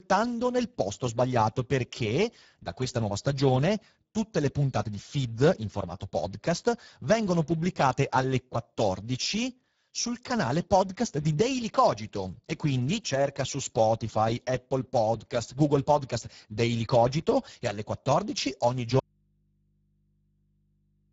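Speex codec damage runs through the whole speech clip, plainly audible, at a rate that fits about 10 kbps: with so few bits left for the excitation signal, the speech comes out noisy and hoarse, and nothing is present above 7.7 kHz, the upper band being only a shaped noise fill rather than real detail. An audio dropout to a faint residue begins at 18.99 s and lasts to the end, likely a lost input with the path still live, leaving only mains hum some 40 dB below the speech, an abrupt cut rather than a pause or fade.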